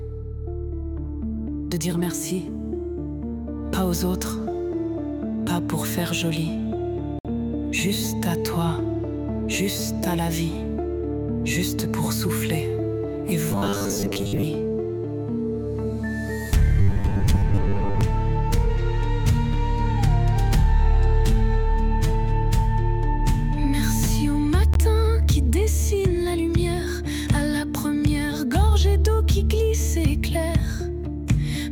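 Audio packets were likely held up over a Bluetooth link, so the headphones' buffer ran dry: these Bluetooth stalls cut the sound to silence for 58 ms from 7.19 to 7.25 s and briefly again at 24.74 s, then playback resumes. In two later stretches, fresh audio likely arrived too seldom and the playback software kept replaying its last short buffer. This robotic sound from repeated short buffers imposes a fixed 100 Hz buzz, which fits a 10 ms repeated chunk, giving a rigid metallic tone from 13.51 to 14.44 s, where most of the audio is repeated, and from 16.81 to 18.01 s, where about half is.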